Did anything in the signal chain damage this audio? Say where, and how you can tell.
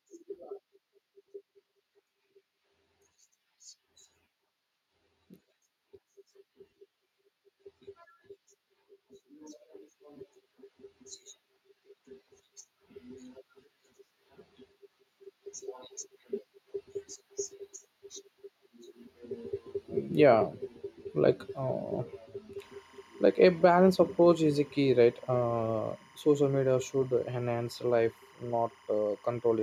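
Yes. Timecode bleed enters at the analogue wiring stage, from about 22.58 s to the end of the speech clip. Linear timecode running at 25 frames per second leaks from a neighbouring track or cable into the audio path. Its square wave flips between two tones near 1 kHz and 2 kHz as the bits change, so a steady chirping warble sits behind the speech, roughly 30 dB below it.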